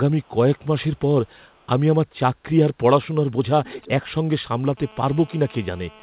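At 0.21–0.29 s, 1.25–1.67 s and 3.64–3.89 s, echo leak: a copy 345 ms late, very faint at first, clearly audible in the third, likely from an incomplete loudspeaker echo canceller.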